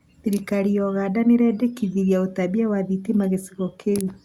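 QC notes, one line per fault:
No faults found.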